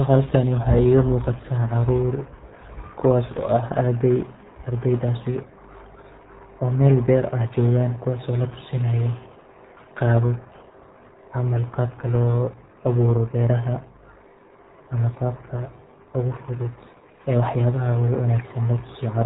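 From start to finish the speech sounds muffled and gargly, with nothing above 3.8 kHz and heavy codec damage. This is the RealAudio 14.4 codec at work, squeezing the signal into a very low-rate stream; the damage fits an 8 kbit/s budget.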